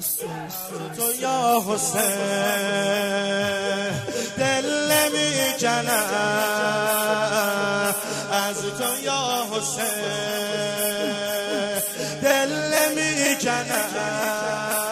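Nothing here calls for comment: the audio carries on without any technical fault to point to at any moment.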